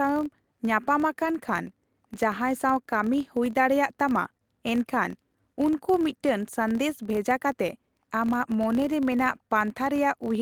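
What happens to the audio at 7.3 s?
Like the rest of the clip, 7.3 s carries the filter restarted on every block fault: each block starts cold, leaving a 43.1 Hz buzz that tracks speech level, consistent with 1024-sample blocks.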